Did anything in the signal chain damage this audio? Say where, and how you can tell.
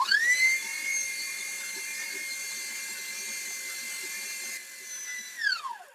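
Yes. The damage comes from the call-processing stage, where a noise suppressor built for speech was left on music or sounds across the whole clip. Attacks come through, but held tones, ambience and decaying tails are pushed down by around 10 dB, so the level pumps and thins. A compressor would duck the sound after loud peaks. This dips only the steady, noise-like parts, which points to noise suppression.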